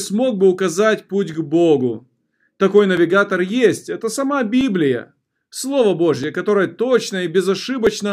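From 1.34 s, just after "бы указать путь", a click recurs every 1.63 s until 7.87 s, likely clock drift buffer slips dropping or repeating roughly 50-sample blocks.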